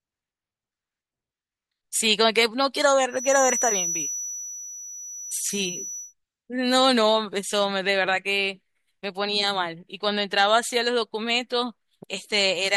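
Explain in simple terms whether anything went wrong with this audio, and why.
Something did go wrong: from 3.07 to 6.15 s there's a feedback whistle, a thin, steady tone around 5.9 kHz sitting quietly behind the speech and slowly swelling and fading. That's likely a speaker-to-mic loop teetering right on the edge of howling.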